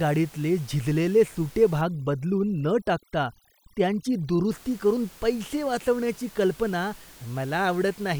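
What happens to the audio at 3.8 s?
At 3.8 s the background drops and breaks up into twinkling, warbling specks. This is overdone noise removal, running from 1.81 s, just after "गाडीतले झिजलेले सुटे", to 4.51 s, before "करून पैसे वाचवण्याची कल्पना". The reduction is set so hard that any frequency band close to the estimated noise, room noise sitting about 25 dB under the speech, is pushed down or shut off, taking the quieter parts of the voice with it.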